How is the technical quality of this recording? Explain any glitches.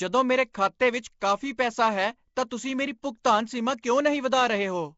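The recording is clearly degraded: a low-rate codec has left a plainly audible rough, hissy halo over the whole speech, and two attacks are smeared by short bursts of hiss.

Throughout, the speech sounds grainy and underwater, with nothing above 7.7 kHz. The likely cause is Nellymoser compression, fitting a 32 kbps stream: bands too weak to earn bits are replaced with noise. On a spectrogram, the top stops flat at 7.7 kHz, with speckled noise patches between harmonics.

At 0.53 s and 3.82 s, pre-echo smears a sharp onset. The codec spreads quantisation noise across each block, so noise meant for the loud attack fills the quiet just before it, for about 18 ms and 13 ms. The waveform shows a fuzz ahead of each attack, and the spectrogram shows a thin vertical noise smear.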